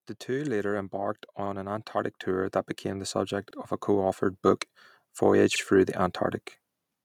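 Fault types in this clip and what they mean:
Automatic gain rising: the gain control decided the level was too low and ramped up by about 9 dB, so everything swells together from 0.26 to 3.17 s.
Overlapping chunks: the audio arrives in 2-second blocks that each start 50 ms early, so that slice replays as a stutter at 1.46, 3.51 and 5.56 s.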